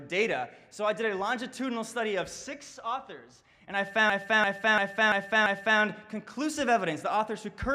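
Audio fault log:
4.10–5.80 s, system hang loop: the machine stalls while the sound hardware keeps replaying its ring buffer, so one 341 ms chunk repeats five times, a stutter at about 2.93 Hz. That length fits a 16384-sample buffer, and almost nothing is lost afterwards.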